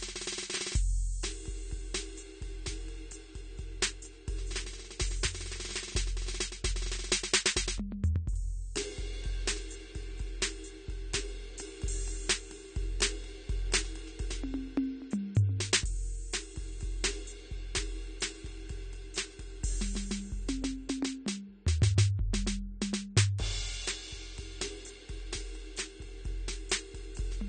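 Throughout, the music is dull and smeared, with warbly sustained tones and nothing above 9 kHz, likely AAC compression at something like 32 kbps.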